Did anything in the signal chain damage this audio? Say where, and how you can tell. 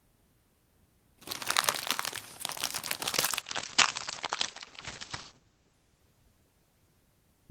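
Yes: a call bitrate drop from 3.07 s to the end. Bandwidth estimation cut the codec from 64 to 11 kbps, coarsening the sound and dulling everything above 8 kHz.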